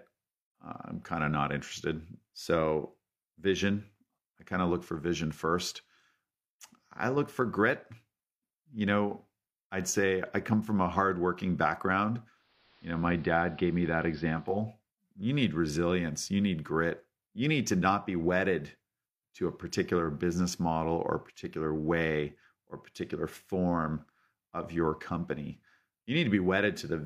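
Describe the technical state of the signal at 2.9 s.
At 2.9 s the speech signal is intact, with no audible technical fault at that moment.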